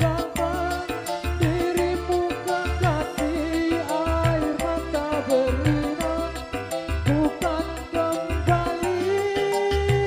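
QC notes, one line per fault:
1.82–10.06 s: channel delay (comb filtering). One channel lags the other by roughly a single sample, around 0.02 ms, before the mono sum. Cancellation begins near 20 kHz, so the top end thins and the sound turns slightly dull.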